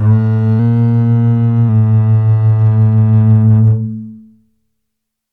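From 0.59 s to 1.69 s the music suddenly runs about 6% fast and sits a full semitone sharp, with tempo and pitch rising together, then drops straight back to its proper speed and tuning. The detuning is clearest on sustained tones. This is likely a drift correction step: software keeping two clocks in step changed the playback rate in a single jump to rebalance its buffer, then returned to normal rate once the buffer was corrected.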